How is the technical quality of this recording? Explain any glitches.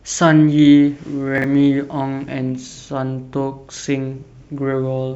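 The recording has one glitch, a short stretch of chunks out of order in the speech between 1.38 and 1.44 s. A 20 ms block of audio was delivered late and plays two chunks after its proper place, so the two blocks that should follow it come first. Nothing is lost, but the reshuffled segment leaves three hard joins, heard as a brief jumbled stutter. A waveform shows abrupt discontinuities at each seam, and a spectrogram shows thin vertical broadband lines with harmonics that jump instead of flowing.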